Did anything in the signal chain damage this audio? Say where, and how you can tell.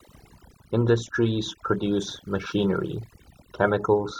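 Yes, overdone noise removal at the processing stage, throughout: the suppressor gates bands near its noise estimate, leaving twinkly near-silence between phrases and taking quiet parts of the voice with it.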